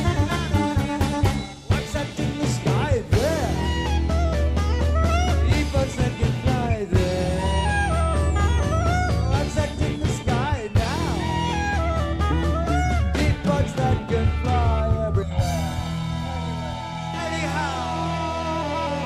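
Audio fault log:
15.22–17.14 s, channel delay (comb filtering): for this stretch one channel of the original pair arrives later than the other, by roughly one and a half milliseconds, and the two are then folded down to mono. Everything common to both sides cancels at regularly spaced frequencies, the lowest notch sitting around 400 Hz with further ones stacked above it at even intervals, so the sound turns hollow and phasey with fixed notches for those two seconds.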